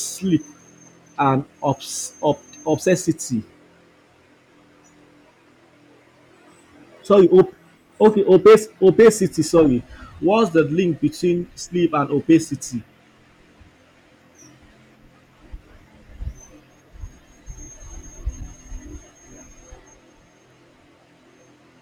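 At 7.13 to 7.41 s and again from 8.04 to 9.08 s, the speech is pushed about 3 dB past what a stage can carry, so hard clipping squares off its peaks and adds a gritty crackle. Brief, lighter overloads of about 1 dB follow at 10.58 and 12.32 s as short clicks. The waveform shows flat-topped peaks. The spectrogram shows bright vertical smears of harmonics reaching high into the upper kHz range.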